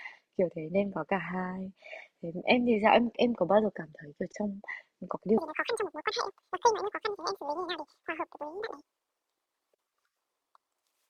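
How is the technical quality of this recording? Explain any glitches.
The recording has one serious glitch: from 5.38 s to the end, the speech plays at twice its proper speed.

At 5.38 s the audio starts being read two samples at a time (double speed), continuing through to 11.09 s. The reader treats each pair of samples as a single frame, as if the data held two channels or samples twice as wide, so every real sample is used only half as long. The speech runs at 2x and jumps a full octave (12 semitones) higher.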